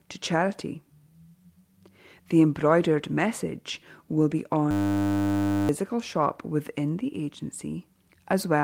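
Speech, with a steady 100 Hz buzz from 4.71 to 5.69 s, between "embroidered message will be" and "shop within". That is a system hang loop: the system froze while the hardware kept replaying one 10 ms stretch of its ring buffer, replacing about a second of speech.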